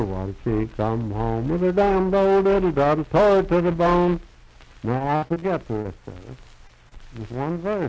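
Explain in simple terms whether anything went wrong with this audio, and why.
Between 4.98 and 5.44 s the audio turns choppy and robotic. This is repeated packet loss (robotic sound): chunks of the call arrived too late or not at all, five times in under half a second, the longest hole about 60 ms. Each time the receiver stretched the last bit of sound to cover the gap, so roughly a third of that stretch is patched rather than real. The close spacing of the holes is what makes it sound mechanical instead of like one brief blip.

Later there are three isolated hiccups, at 5.82 to 5.91 s, 6.67 to 6.71 s, and 6.89 to 6.93 s. Each is short concealed packet loss, where about 20 ms of audio went missing and was filled by briefly carrying the previous sound forward before blending back in. These come across as a quick smear or wobble. The first one also drops a sliver of the real audio. They differ from the earlier robotic patch because each is a single gap standing alone, not a rapid string of them. 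The call connection itself, which carries nothing above 8 kHz, is not at fault here.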